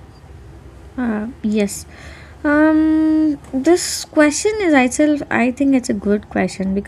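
No technical faults are audible anywhere in the recording.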